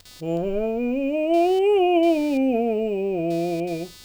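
Music, about 4 seconds long, with computer activity noise running throughout. A buzzing, chirping layer sits under the music from start to finish. It pulses at roughly 300 Hz and lies about 30 dB below the music. It follows the computer's workload, not the music. Processor, graphics or mouse activity draws changing current. That current disturbs the ground the audio circuit shares. The disturbance leaks into the signal as this rasping buzz.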